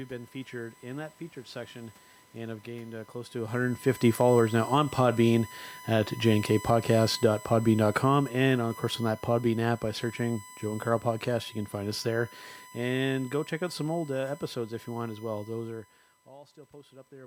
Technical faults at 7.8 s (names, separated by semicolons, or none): USB whine; automatic gain falling